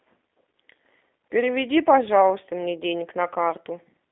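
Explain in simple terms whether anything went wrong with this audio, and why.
Throughout the speech, it sounds thin, slightly rough and synthetic, like a phone call. This is G.729 codec damage: the VoIP codec rebuilds speech from a simplified model and drops everything above about 3.6 kHz.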